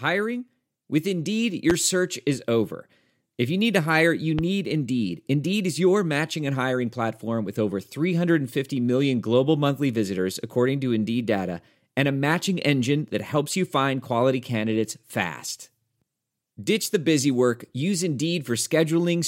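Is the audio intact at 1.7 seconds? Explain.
No. A loud pop occurs from 1.70 to 1.73 s, just before "search is over": a single sharp transient peaking well above the speech level, most likely a brief voltage spike entering the signal path, with the speech continuing beneath it.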